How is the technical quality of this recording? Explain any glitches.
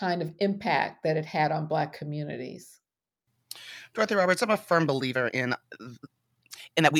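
The recording has one glitch near the end. From 5.10 s to the end, there is a time-stretched section. The speech suddenly runs at twice its pace, yet the pitch stays the same. It sounds rushed. Software likely squeezed this part to fit a length by dropping short pieces of audio.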